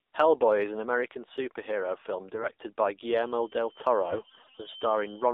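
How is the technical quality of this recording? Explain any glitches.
The quality is poor, with two glitches. The AMR narrowband mobile codec runs throughout. Sound is confined to about 300 Hz to 3.7 kHz, and the buzzy, synthetic texture fits a low rate near 7.4 kbps.

AMR bit errors strike from 2.34 to 2.52 s and again from 4.02 to 4.68 s. A few percent of weakly protected bits flipped, misplacing excitation pulses. The speech turns hoarse, scratchy and gargly.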